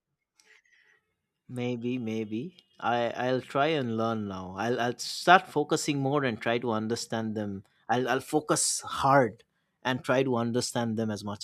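No technical faults are audible.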